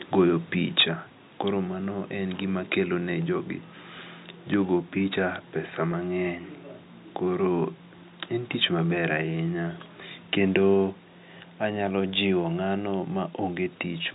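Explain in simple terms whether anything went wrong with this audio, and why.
A few things went wrong, all brief.

Right near the start, from 0.77 to 0.83 s, the loudest bit of speech picks up a harsh, crackly edge. That's most likely microphone overload: the mic input was set too hot, so the biggest peaks slammed into the converter's ceiling and got their tops sliced flat. A noticeable share of the waveform in that spot is chopped, which is why it sounds gritty rather than just loud.

Right in the middle of that crackle, at 0.81 s, the level drops in one clean step, voice and background together. That's a microphone volume stepped down event, most likely the call software spotting the overload and turning the mic input down to stop it. It happens again at 10.74 s, this time a much gentler dip, with no distortion right before it.

At 5.92 s there's a tiny hiccup where the sound seems to hang for a split second with a slightly buzzy, held quality. 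That's packet loss with pitch repetition: one small chunk of audio, about 10 ms worth, never arrived, so the receiver filled the gap by repeating the last little cycle of the voice. Because the gap was so short, it just smears for an instant instead of dropping out.

The G.711 phone coding underneath is doing its usual narrowband telephone thing.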